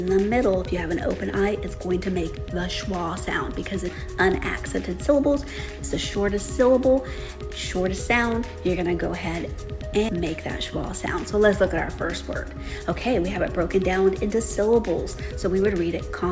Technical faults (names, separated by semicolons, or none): none